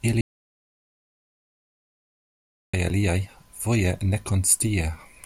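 From 0.21 to 2.74 s, an audio dropout to silence cuts the speech to silence with no room tone, likely from a lost input.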